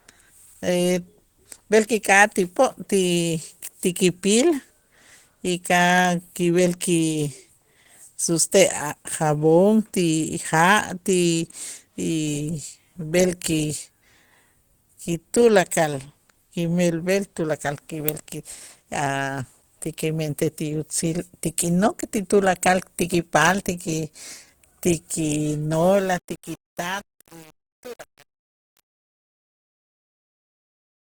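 A speech recording runs the whole way with plainly audible codec damage, likely from Opus compression. The voice sounds hoarse and muffled, with a grainy, rough edge. That is typical of the codec's hybrid speech mode, which fits a low rate of about 16 kbps. Energy still reaches near 20 kHz, so the band is not cut short. The roughness comes from coarse coding inside that band. From 25.74 s, just after "ti ki", to the end at 31.15 s, there is truncation distortion on a fade. The fade-out begins at about 25.7 s and glides down to 31.1 s. But the gain stage keeps too few bits, consistent with an 8-bit path, and adds no dither. As the level drops, the waveform collapses into coarse steps. The tail turns gritty.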